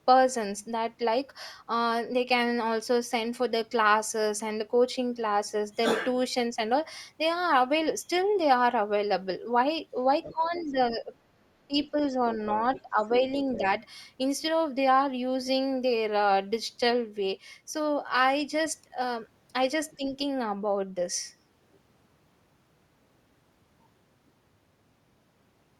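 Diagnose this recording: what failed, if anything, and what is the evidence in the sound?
The other side's voice is leaking through, a call-processing fault. A second, fainter voice sits about 15 dB under the speech at 10.23–10.73 s and 12.46–13.66 s, with a very faint trace at 19.91–19.96 s. The likely cause is the echo canceller leaving loudspeaker pickup in the microphone signal. On a spectrogram, a weaker, separate harmonic pattern runs beneath the main one.

Speech is suppressed in double talk, again in call processing. The talker's level dips by roughly 10 dB at 10.31–11.12 s, 12.82–13.64 s and 19.97–20.15 s, and by about 20 dB at 11.67–12.13 s. The dips at 10.31–11.12 s and 12.82–13.64 s overlap the leaked voice. The likely cause is the canceller attenuating everything when both sides talked at once. The waveform envelope sags in these spans, and the spectrogram thins or shows gaps.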